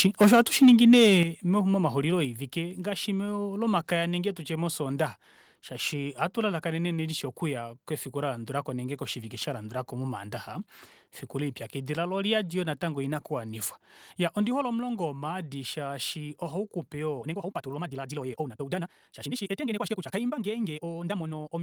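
The input gain on this speech recording was likely set too high for the first 1.2 s, driving peaks about 6 dB past the converter's ceiling. This is microphone overload: roughly one sample in twenty is flattened, giving the loudest syllables a harsh, crackling edge. At 1.23 s the call software likely reacted to that clipping by pulling the device's input gain down in a single step, a microphone volume stepped down event of about 7 dB. Voice and background both drop abruptly in level right after the distorted opening. From 17.15 s to the end, software likely compressed the audio in time to fit a shorter length, discarding short pieces so the pitch would hold. This time-stretched section plays at twice the original pace, so the speech suddenly sounds rushed while its pitch stays unchanged.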